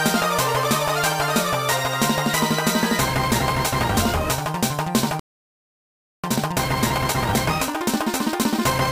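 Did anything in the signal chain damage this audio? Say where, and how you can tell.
Yes, at the playback stage. A playback stall silences the sound from 5.20 s to 6.24 s, about 1.04 s. The player likely ran out of buffered data, unlike a network dropout, which would lose the missing audio.

From 6.24 s to the end, a time-compressed catch-up runs the audio about 1.25 times faster at unchanged pitch, by cutting out and cross-fading short pieces. Normal pitch rules out simple sample-rate drift, which would shift pitch upward.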